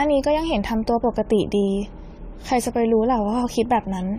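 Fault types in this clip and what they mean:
Generation loss: the speech sounds swirly, hollow and smeared throughout, with blurred attacks and nothing above 17.2 kHz. That's worse than a single 64 kbit/s AAC-LC pass would give, so it's likely from around ten re-encodes, each stacking fresh quantisation noise.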